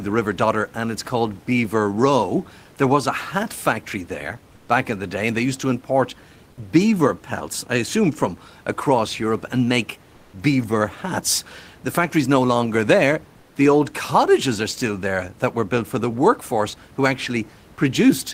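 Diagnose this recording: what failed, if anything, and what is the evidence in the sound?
Right after "factory's no longer there", from 13.39 to 13.55 s, the room noise gives way to a flat, featureless hiss about 3 dB quieter for 160 ms. That's comfort noise in place of the background at the codec stage, likely Opus-style DTX pausing transmission while the receiver fills in synthetic noise.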